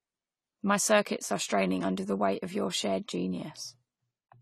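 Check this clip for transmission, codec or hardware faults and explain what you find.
One codec fault runs throughout: the speech sounds dull and smeared, nothing above 14.1 kHz, sibilants fizzy. This is likely AAC compression, low-bitrate quantisation fitting about 32 kbps AAC-LC.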